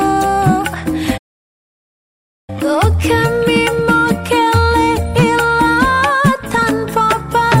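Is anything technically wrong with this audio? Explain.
Yes, there's a playback stall from 1.17 to 2.50 s. The sound cuts out mid-flow and goes silent for about 1.3 seconds before picking up again. That's most likely the player running dry of data or its thread getting blocked until it recovered.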